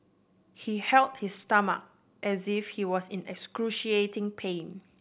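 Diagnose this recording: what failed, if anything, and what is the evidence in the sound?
No fault heard in this recording.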